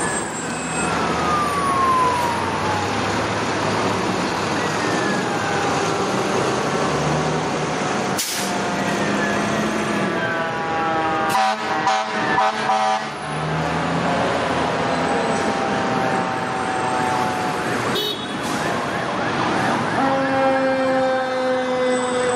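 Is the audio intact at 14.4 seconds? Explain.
Yes, the audio is intact at 14.4 seconds, with no dropout, click, distortion or other fault at that point.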